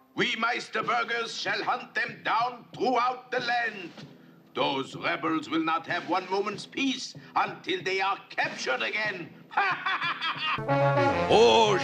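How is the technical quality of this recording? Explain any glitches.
No glitches to report here, as nothing in the recording trips up or breaks the flow at any point.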